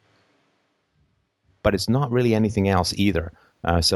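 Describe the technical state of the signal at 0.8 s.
A switch to a distant microphone is under way at 0.8 s, running from the start of the clip to 1.66 s, where the sound cuts back just before "it's not really anything". The likely cause is that the close microphone's feed dropped out and a farther pickup carried the speech instead. At 0.8 s the speech sounds roomy and hollow, thinner in the low end, at much the same level, with faint room noise roughly 35 dB below the speech.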